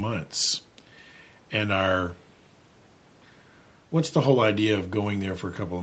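Speech with no technical faults to report. Having come through a call's microphone processing and codec, the sound carries nothing above 8 kHz, which fits a wideband Opus setting.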